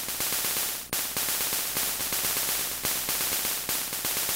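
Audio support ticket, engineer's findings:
Sound repeats itself 1.67–3.35 s: a full-band second copy trails about half a second behind, a few dB quieter, dry with no decay, starting and stopping abruptly. Doubled audio track, likely a second capture via slower path or misaligned edit.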